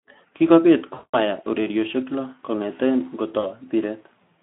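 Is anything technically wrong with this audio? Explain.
Yes. VoIP packet loss concealed by the speech codec occurs at 0.93–1.18 s, just before "mahia orerioshek lo", and again at 3.39–3.45 s. The decoder bridged about 200 ms and 40 ms of missing audio by extending its last pitch and filter at falling gain, so the speech smears into a fading buzz or coloured noise and stays weakened briefly afterwards.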